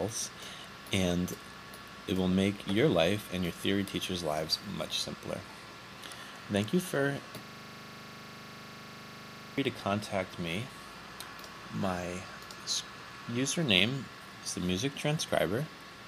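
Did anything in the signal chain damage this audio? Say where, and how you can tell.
Yes, a system hang loop at the driver/buffer stage from 7.44 to 9.58 s. One 40 ms slice repeats identically, giving a 25 Hz buzz, unlike network stutter, which varies between repeats.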